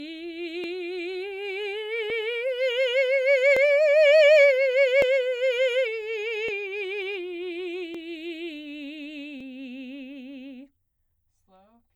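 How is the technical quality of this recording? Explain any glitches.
The music is marred by one recurring glitch. From 0.64 s to 10.87 s, a click pops out every 1.46 s, about seven times. These are clock drift buffer slips: two mismatched clocks, roughly 700 ppm apart, likely force the buffer to drop or repeat a block of around fifty samples at each click.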